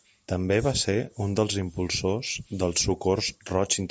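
Speech that has passed through a call's microphone processing, which removes the lowest bass and leaves nothing above 8 kHz, with no technical faults to be heard anywhere in the recording.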